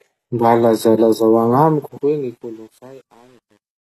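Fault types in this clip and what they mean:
HE-AAC compression: The speech sounds plainly damaged throughout, likely from HE-AAC at a low bitrate near 16 kbps. Only the lower band is truly coded. The treble is rebuilt from copied lower bands, so s sounds turn gritty and lispy. Nothing is heard above 12.4 kHz.
Truncation distortion on a fade: The fade-out begins at about 1.6 s and runs to the end. From 1.6 s the quietening sound turns grainy, as the gain stage keeps too few bits, about 9, with no dither. From 2.24 s the grit is at its worst.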